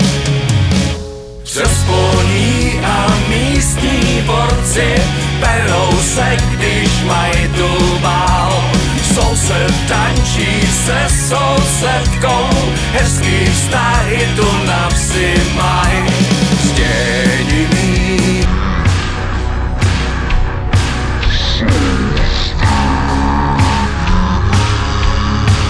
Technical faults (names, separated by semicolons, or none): wrong sample rate